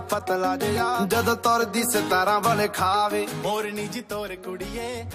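Nothing stood out on listening to this clip.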